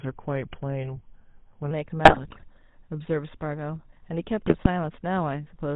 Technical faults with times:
0.00-5.76 GSM full-rate codec
0.00-1.71 section at the wrong speed
2.04-2.44 GSM bit errors
4.46-4.67 GSM bit errors

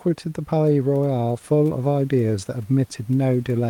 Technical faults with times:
none

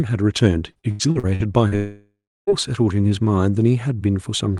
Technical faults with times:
0.71-1.75 repeated packet loss (robotic sound)
1.76-2.50 long network dropout

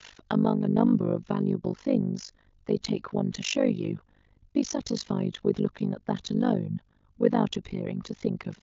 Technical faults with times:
0.00-8.62 overlap-add ripple

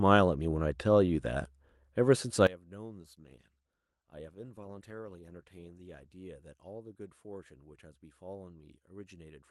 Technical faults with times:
2.47-9.51 one channel inverted
3.03-6.25 call bitrate drop

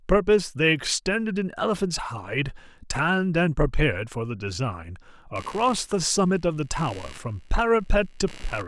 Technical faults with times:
5.36-8.68 computer activity noise

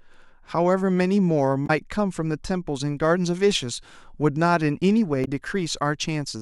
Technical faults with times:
1.63-1.70 damaged data in a compressed stream
5.21-5.28 damaged data in a compressed stream

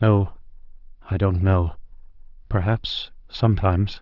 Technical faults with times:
none

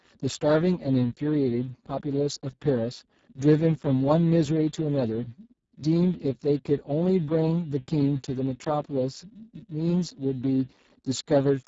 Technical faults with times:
0.00-11.67 Speex codec

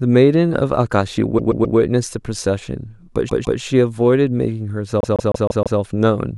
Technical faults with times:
1.37-1.76 repeated frames
3.28-3.59 repeated frames
5.00-5.79 repeated frames

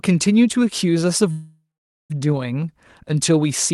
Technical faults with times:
1.31-2.12 call audio freeze

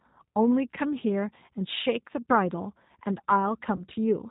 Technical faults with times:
0.00-4.31 G.729 codec
3.76-3.84 VoIP packet loss concealed by the speech codec

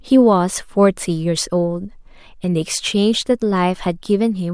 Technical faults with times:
none

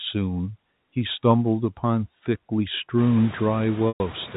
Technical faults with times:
0.00-4.36 noise suppressor artifacts
3.88-4.00 packet loss with pitch repetition

